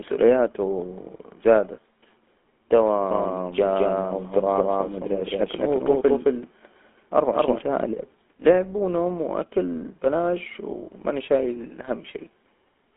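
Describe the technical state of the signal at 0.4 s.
At 0.4 s the speech carries GSM full-rate codec coding, present throughout. Pulse-excited vocal-tract modelling leaves buzzy, gravelly roughness, with nothing above 3.8 kHz.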